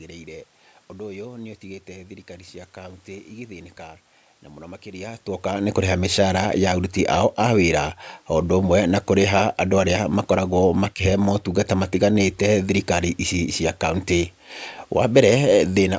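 Nothing here counts as a technical fault: the background noise belongs to the room, the change in level around 5 seconds is just the talker moving relative to the microphone, and the lack of anything above 8 kHz comes from the call's microphone processing.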